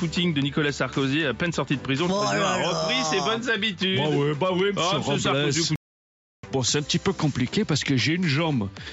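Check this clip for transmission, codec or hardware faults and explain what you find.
One fault is present: a playback stall from 5.76 s to 6.43 s, lasting 0.68 s. The sound cuts out in mid-flow and the output falls fully silent for that stretch before resuming. The likely cause is the player running out of buffered data, or its output thread being blocked, so nothing reached the device until it recovered. The audio's lowest bass is taken out, which is consistent with normal call microphone processing rather than a fault.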